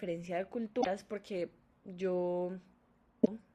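At 0.78 to 0.87 s and again at 3.21 to 3.28 s the speech breaks into a short glitch caused by damaged data in a compressed stream: corrupted bytes make the decoder misread those frames and lose sync until it finds the next valid frame header.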